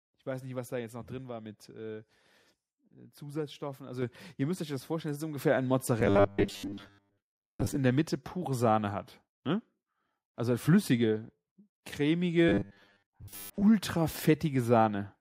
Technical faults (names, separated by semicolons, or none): microphone volume stepped up; robotic sound from repeated short buffers